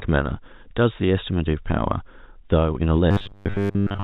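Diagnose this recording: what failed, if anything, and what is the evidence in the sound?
A driver or buffer stage likely ran short of fresh audio from 3.11 s to the end and kept replaying its last block, causing robotic sound from repeated short buffers. The loop imposes a rigid, metallic 100 Hz buzz, which fits a 10 ms buffer, and most of the real speech is skipped.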